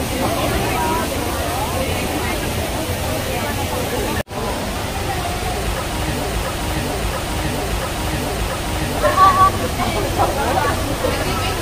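From 6.24 s to 8.97 s there's a broken-record loop: a 0.68 s fragment plays four times back to back, identical each pass, and whatever should have come through there is gone. Most likely the player or stream stalled and kept resending its last buffered chunk.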